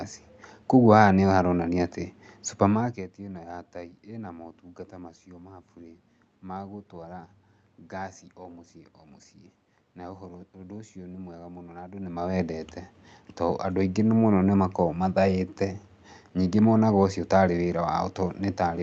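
No technical fault is present in this speech: the room noise belongs to the recording, the level shifts near 2.5 s and again around 12 s are the talker changing distance from the microphone, and the band limit near 8 kHz with coding texture is what a call codec such as Opus normally produces at a moderate bitrate.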